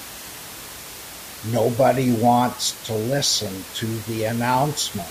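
No technical faults are audible anywhere in this recording.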